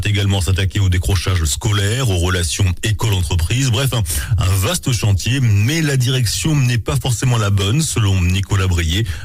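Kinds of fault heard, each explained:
Nothing stood out on listening; no technical fault could be heard anywhere in the recording.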